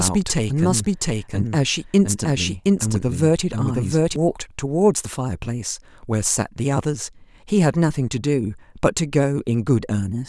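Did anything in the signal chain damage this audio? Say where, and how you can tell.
Yes. From the very start to 4.16 s the speech carries a doubled audio track: a second full-band copy, roughly as loud as the original, trails it by about 700 ms, then vanishes abruptly at 4.16 s with no decay tail. On a spectrogram every harmonic stack and onset reappears about 0.7 s later at matching intensity; the waveform shows overlapping envelopes. The stage is likely capture routing, with the same source picked up twice through a slower second path.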